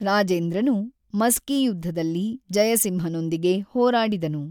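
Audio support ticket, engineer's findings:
Speech clip reviewed in full, no audible defects found, nothing to escalate.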